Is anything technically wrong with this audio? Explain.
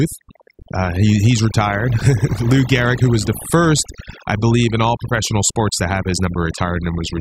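Yes. Throughout the speech there's overdone noise removal: the denoiser was pushed so hard that any frequency band sitting near its noise estimate gets pulled way down, taking the quieter parts of the voice too. The background drops and breaks up into twinkly specks.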